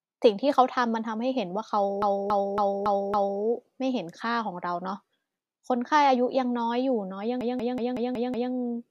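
At 2.02 s the speech catches on repeated frames: a chunk of about 279 ms, which fits a run of three compressed frames, plays five extra times until 3.42 s, so you get a mechanical stutter and the clip stretches by about 1.39 s. It happens again at 7.41 s, with a shorter 186 ms block, about two frames' worth, looping six more times through 8.52 s and adding roughly 1.11 s. Both come from the same stretch of encoded data being written or sent more than once.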